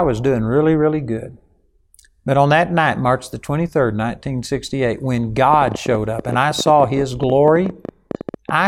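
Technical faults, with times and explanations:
5.37–8.50 s: train of clicks. About forty similar pops arrive irregularly, near 11.9 per second, about 10 dB above the speech. Likely outside interference or a struggling interface.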